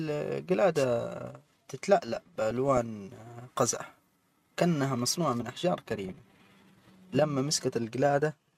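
Speech, hit by DAB burbling in three bursts: 2.07 to 2.78 s, 3.67 to 3.94 s, and 6.09 to 6.32 s. It's weak-reception stuff. A few bit errors per thousand slip past the error correction into the MP2 data, so corrupted samples put short blips of noise in single sub-bands and corrupted scale factors make sub-bands jump in level for up to a frame.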